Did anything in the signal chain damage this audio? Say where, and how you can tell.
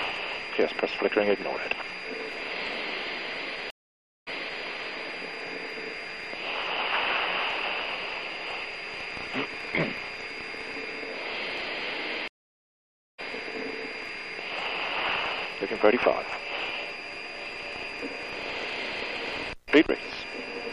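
Yes. Stream reconnects at 3.70–4.64 s and 12.28–13.20 s, a network-stage fault. The connection dropped, leaving 0.56 s and 0.9 s of silence, then a fresh decoder resumed mid-stream, first 0.37 s earlier, where the server resent a burst, then roughly a second later.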